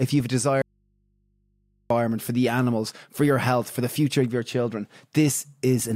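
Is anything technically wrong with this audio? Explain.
Yes. From 0.62 to 1.90 s an audio dropout to a faint residue cuts the speech abruptly, leaving only mains hum about 45 dB down before "for the animals for". The likely cause is signal lost while the path stayed live. The waveform flatlines, and the spectrogram shows only thin low hum lines.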